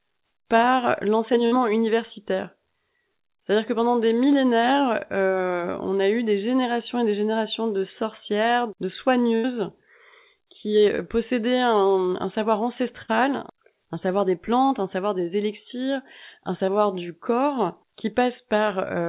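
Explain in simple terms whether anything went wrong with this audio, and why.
Bursts of packet loss at 1.46, 9.36 and 13.02 s meant the receiver held the last sound briefly and then jumped ahead, so 60 to 80 ms of audio is missing each time.

Short concealed packet loss at 10.96, 14.66 and 16.66 s was patched by extending the previous sound, leaving a brief smear or wobble lasting a few hundredths of a second.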